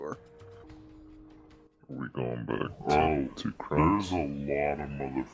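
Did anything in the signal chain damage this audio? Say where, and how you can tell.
Yes. From 0.64 s to the end, the sound plays back at the wrong sample rate, a fault at the playback stage. Everything runs at about two-thirds speed, and pitch drops by about 7 semitones. That fits samples recorded at 24 kHz being clocked out at 16 kHz with no conversion. What sets this apart from a pitch-shifter or time-stretch is that speed, pitch and timbre all move together by the same ratio, with no processing artefacts.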